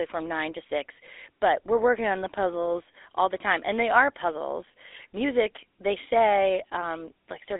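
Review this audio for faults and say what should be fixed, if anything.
GSM full-rate codec damage runs throughout the speech: the voice has a buzzy, gravelly roughness because the vocal tract is modelled and driven by coarsely spaced pulses. The sound sits in a 300 Hz to 3.7 kHz telephone band, with nothing above 3.8 kHz, which fits a 13 kbps GSM path. To prevent it, capture or route the audio over a wideband link instead of a GSM call.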